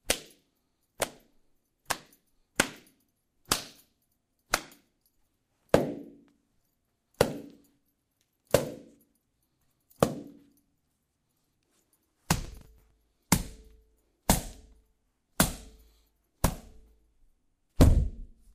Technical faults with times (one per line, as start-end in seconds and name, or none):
12.45-13.18 processor overload crackle